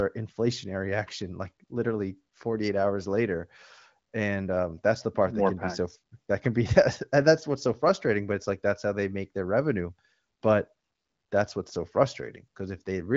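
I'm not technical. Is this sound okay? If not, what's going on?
Yes, nothing stood out on listening; this is a speech recording carried over an HD Voice phone connection, and it sounds as it should.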